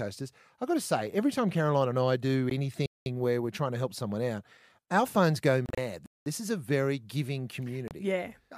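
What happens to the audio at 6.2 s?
At 6.2 s the speech is in a gap between chunks. It runs from 6.06 to 6.26 s, a 200 ms stretch of silence. The audio here arrives in 3.0 s chunks. This join is left empty instead of flowing straight on, probably from padding or a late start on the next chunk. No speech is removed. It is pushed later. The result is a short hole that interrupts the speech.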